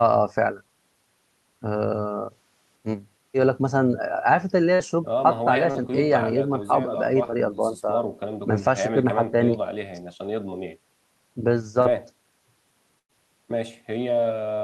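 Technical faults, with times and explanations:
4.75 s, 5.71 s, 7.31 s and 11.82 s: short concealed packet loss. About 40 ms of audio never arrived in time at each point, and 20 ms at 7.31 s. The receiver extended the preceding sound to cover each hole, then blended back. Each one is a brief smear or wobble in the speech.
12.99 to 13.11 s: burst of packet loss. About 100 ms went missing in one run. The receiver carried the last sound forward and let it fade as the gap lengthened. That gives a held, dying tail before the speech resumes with that stretch gone.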